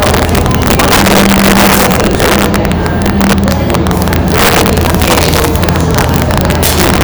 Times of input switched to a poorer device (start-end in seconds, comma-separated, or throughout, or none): none